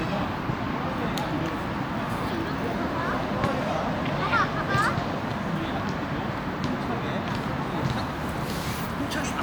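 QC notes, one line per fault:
Nothing to flag here, the sounds come through with no problems worth noting.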